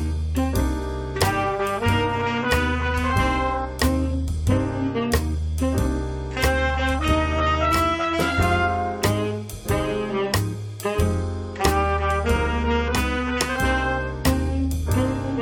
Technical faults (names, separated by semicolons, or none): mains hum